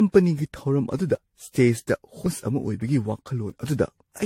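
From start to finish the speech carries generation loss, likely from around seven passes through AAC-LC at bitrates that point to roughly 64 kbit/s. Each pass requantises on a shifted frame grid. Noise and spectral holes pile up. The sound is swirly, hollow and smeared, attacks blur, and nothing remains above 16.5 kHz.

At 1.15 s and again at 3.50 s there is a dropped buffer (overrun). A block of samples, likely about 40 ms, was overwritten before it was read. The two sides join directly, without silence. Each one is heard as a sudden jump forward.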